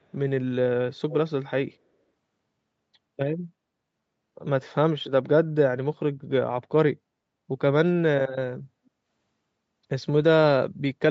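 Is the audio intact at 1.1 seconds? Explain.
No. From 1.1 to 1.15 s there is an echo leak: a faint, delayed copy of the speech, about 15 dB below it and trailing by roughly 0.3 s, likely from a loudspeaker's output reaching the far-end microphone that the echo canceller did not fully remove.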